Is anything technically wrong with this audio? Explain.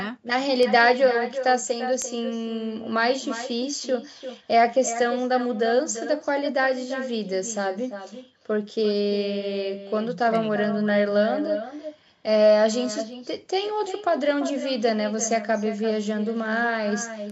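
Yes, there are two faults in this speech recording.

Throughout the clip there is echo with no canceller. The far end is playing the call through a loudspeaker, its microphone picks that up, and nothing subtracts it before it returns. Each phrase is therefore followed, roughly 300 ms later, by a copy about 11 dB quieter. The copy sounds thinner, so the talker seems to be shadowed by a quieter delayed double.

From 0.63 s to 17.30 s there are word clock ticks. A digital link is being read by a device running on its own clock rather than locked to the sender's. Each time the two clocks slip past each other, one sample is dropped or repeated. The result is about fifteen sharp ticks of uneven strength, roughly every 1.5 s. That rate points to a clock mismatch of around 15 parts per million. The spacing stays steady, and the call's microphone band-limiting, with nothing above 8 kHz, sits underneath.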